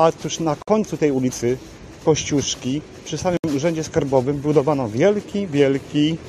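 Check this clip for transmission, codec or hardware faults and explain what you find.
Two short gaps at a join of encoded pieces appear, at 0.62–0.68 s (52 ms) and 3.37–3.44 s (68 ms). Encoder start-up delay and last-frame padding were never trimmed, so the sound cuts to silence, then resumes where it stopped. Waveform and spectrogram show a blank vertical band with smeared edges.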